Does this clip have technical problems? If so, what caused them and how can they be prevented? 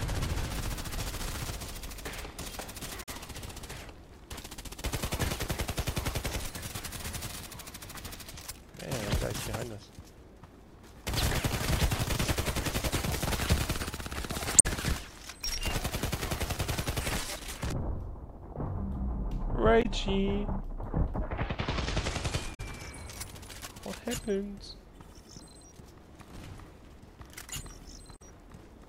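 Yes. Damaged data in a compressed stream causes brief glitches of 40 to 80 ms at 3.02, 14.58, 19.82, 22.53 and 28.15 s. Corrupted bytes make the decoder misread frames and lose sync until it finds the next frame header. Checksummed transfers and error-checked storage would prevent it.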